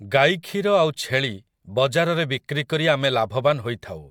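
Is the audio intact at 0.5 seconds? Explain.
Yes, the speech at 0.5 seconds is intact, with no audible fault at that moment.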